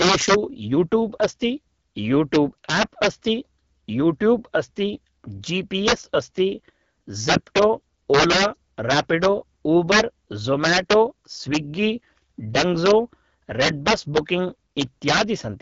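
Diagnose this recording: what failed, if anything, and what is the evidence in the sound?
Integer overflow runs through the whole speech recording, most likely at a fixed-point gain or sample-format conversion stage. The loudest peaks, driven about 10 dB past full scale, wrap to the opposite sign instead of being held at the limit, so each one jumps across the entire range. A small share of samples is affected, but the peaks bring violent cracks. Clipping would flatten those peaks into a duller buzz, while these wraps sound far sharper and more explosive.

The codec stage also left clear damage. The speech has the rough, raspy texture of AMR wideband (HD Voice) coding at one of its lowest rates, which fits about 8.85 kbit/s. Nothing is present above 7.4 kHz, and the top band sounds hissy and noise-like rather than detailed. That matches AMR-WB's modelled core with its synthetic fill near the top. 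A plain low-pass filter would cut the highs cleanly without adding this grainy roughness to the voice itself.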